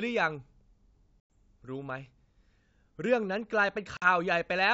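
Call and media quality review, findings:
Packet loss on the ADPCM call. Hard-edged silent gaps at 1.20 to 1.32 s (about 100 ms lost, around ten packets) and 3.97 to 4.08 s (50 ms, around five). Decoder predictor and step size desync. Speech resumes slightly distorted, then settles within tens of milliseconds. G.722 wideband coding at 64 kbit/s sounds clean.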